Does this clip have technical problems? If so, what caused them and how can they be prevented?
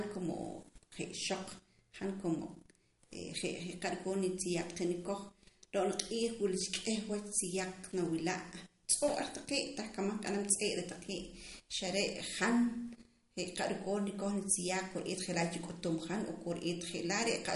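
Yes. The speech carries plainly audible codec damage from start to finish. It is likely MP3 compression. The damage fits a low bitrate, around 48 kbps. With so few bits, the encoder drops weak frequency lines, and they flicker in and out between frames. The result is a watery, swirly texture over the speech. To prevent it, encode at a higher bitrate or keep the original uncompressed file.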